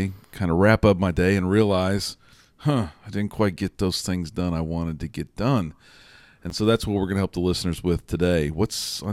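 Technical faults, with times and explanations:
6.50 s, block of digital silence: the speech drops out for 11.6 ms, which fits a 512-sample buffer; the abrupt edges produce a sharp tick.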